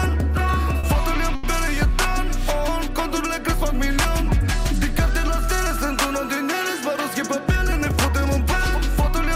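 Late packets twice emptied the jitter buffer, causing a short stall from a late packet at 0.79–0.86 s and 1.35–1.46 s: the sound is held about 40 ms and 80 ms, then resumes without loss.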